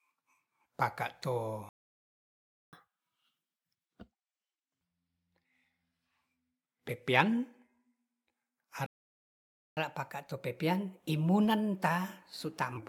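At 1.69 s, just after "paka to", the speech stops dead for about 1.04 s. This is a playback stall. The player likely ran out of data. Sound resumes at 2.73 s. Then comes catch-up at higher speed until 4.81 s. The backlog plays 1.5 times fast, and pitch jumps about seven semitones.

A second stall runs from 8.86 s to 9.77 s, about 0.91 s of silence. It likely has the same cause. Catch-up follows until 12.77 s at 1.1 times speed. The pitch rises about one and a half semitones, enough to sound slightly hurried.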